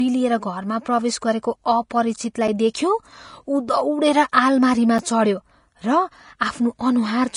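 Hiss and graininess run through the whole speech clip, with nothing above 10.6 kHz and consonant attacks softened. This is likely Vorbis compression at a low setting, which fits roughly 33 kbps: the treble is quantised so coarsely that detail turns to noise.

At 2.48 s and again at 4.98 s, the sound drops out for about 7 ms, a short hole each time. These are gaps between chunks. The audio was handled in 2.5 s pieces, and silence was left at each join.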